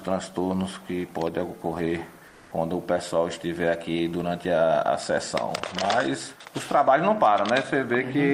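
Comfort noise in place of the background appears from 2.27 to 2.51 s, a stretch of about 240 ms where the real background, sitting about 31 dB below the loudest parts, gives way to a smoother synthetic hiss of a different texture, with the level shifting by about 1 dB. The likely cause is Opus discontinuous transmission: the sender pauses sending during a judged lull, and the receiver fills the gap with generated noise shaped roughly like the background.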